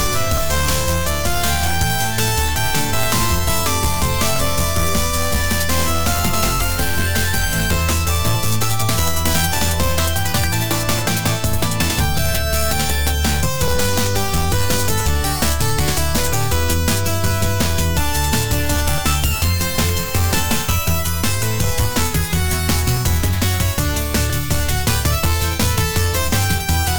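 From 0.38 s to 26.96 s, a click recurs every 1.33 s, about twenty in all: clock drift buffer slips, likely from unsynchronised clocks several hundred ppm apart, each slip dropping or repeating a few dozen samples. Spectrograms show evenly spaced thin broadband vertical lines; waveforms show small discontinuities.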